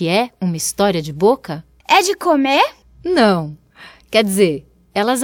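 Nothing stood out as a technical fault on listening to the speech in this recording.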